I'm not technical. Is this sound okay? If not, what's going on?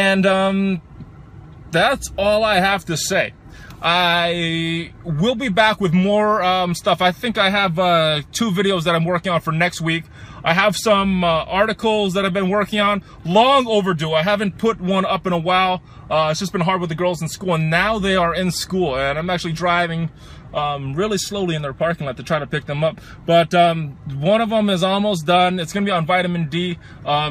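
Yes, the sound is fine: nothing in it points to a technical problem, so there's nothing here you need to worry about.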